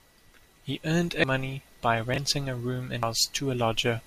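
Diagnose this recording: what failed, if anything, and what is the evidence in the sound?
At the codec stage, damaged data in a compressed stream produces brief glitches at 1.24 s and 3.03 s. Corrupted bytes there make the decoder misread frames and lose sync, so it skips ahead to the next valid frame header.

At the buffering or storage stage, chunks out of order garble the speech between 2.14 and 2.18 s. A 20 ms block was written one chunk late and plays after its successor. No audio is missing, but the misplaced block creates hard joins.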